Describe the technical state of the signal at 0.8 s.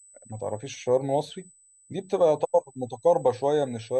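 USB whine is present at 0.8 s, as it is for the whole clip: a steady tone at 8 kHz, strongest at its 16 kHz harmonic, sitting around 30 dB below the speech. The 125-microsecond microframe current draw of a USB bus is leaking into the audio through the power or ground path.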